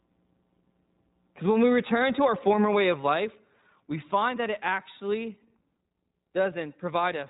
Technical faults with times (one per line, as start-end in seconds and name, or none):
0.00-7.29 iLBC codec